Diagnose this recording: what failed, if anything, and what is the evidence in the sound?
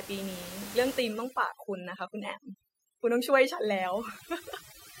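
The failure is overdone noise removal in the call-processing stage, running from 1.00 s to the end. The room noise, sitting about 15 dB below the speech, is largely stripped away from that point, leaving a background broken up into twinkling specks in the gaps. This happens because the suppressor is set too aggressively. It cuts individual frequency bands down or off whenever they resemble its noise estimate, removing quieter speech components along with the noise.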